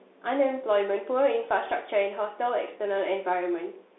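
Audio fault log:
Throughout: Bluetooth CVSD headset codec. The speech is confined to roughly 300 Hz to 3.6 kHz, with nothing above 3.8 kHz. The plainly audible granular hiss and scratchy sibilants point to one-bit delta coding at 64 kbps, whose adaptive step lags fast high-frequency swings.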